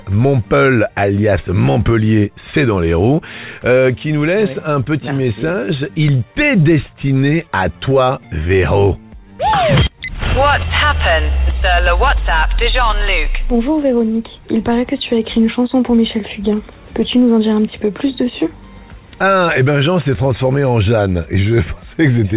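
From 4.84 to 6.63 s there's a run of scattered short gaps: around ten little holes where packets went missing or arrived too late, none much longer than about 15 ms. The receiver papered over each one by stretching out whatever sound came just before it, so you get small ticks and brief smeared hiccups sprinkled through the stretch. They add up to only a small slice of the span, roughly a tenth of a second in total.

Overlapping the tail of that, from 6.25 to 8.49 s, comes a jitter buffer slow-down. The buffer was running thin, so the receiver padded it out by repeating tiny chunks of the waveform over and over, adding 139 ms in all. Playback drops to about 94% speed while the pitch stays put, so things sound drawn out and a bit sluggish.

Then from 10.46 to 13.68 s it flips to a jitter buffer speed-up. Too much audio had piled up in the buffer, so the receiver trimmed out short slivers many times in a row, about a tenth of a second altogether. 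Playback runs at roughly 103% with the pitch unchanged. All of this sits on a narrowband call path with nothing above 4 kHz, which fits G.711 mu-law.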